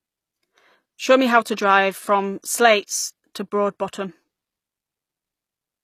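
Throughout the speech, the treble sounds synthetic, likely from HE-AAC compression at a bitrate near 24 kbps. S sounds come out gritty and lispy. On a spectrogram, the upper bands show copied, blocky patterns that stop abruptly at 15 kHz, with harmonics misaligned across the crossover.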